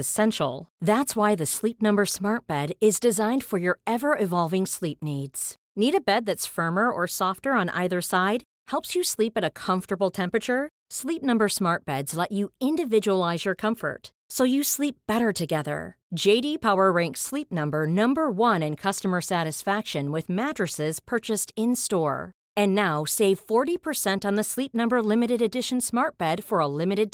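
Nothing in the recording stood out as a technical fault on listening.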